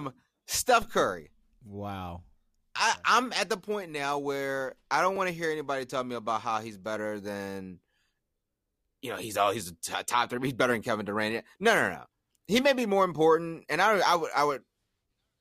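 A repeated buffer at 5.16 s: fresh audio arrived late, so one piece about 5.8 ms long, fitting a 256-sample buffer, played twice, heard as a click or brief buzz in the speech.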